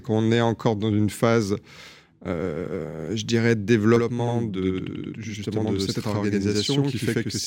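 Channel delay (doubling) runs from 3.96 s to the end at 7.47 s. One channel arrives about 85.3 ms late, which fits a 4096-sample buffer, and summing to mono layers the two copies. The speech gains a same-level slap echo trailing each syllable.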